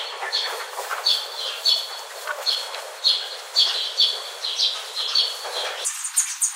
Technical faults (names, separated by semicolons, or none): audio read two samples at a time (double speed)